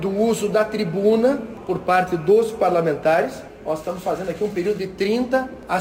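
From start to finish the audio carries crude rate conversion: samples were repeated rather than filtered to change the rate, a stepping that fits a 44.1 kHz to 48 kHz conversion. The resulting error, roughly 30 dB below the signal, forms inharmonic tones and is heard as a gritty fizz riding on loud and bright passages. Unlike steady hiss or dither noise, it rises and falls with the signal and adds tones unrelated to the material.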